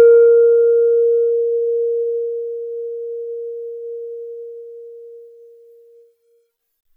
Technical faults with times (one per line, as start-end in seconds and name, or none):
none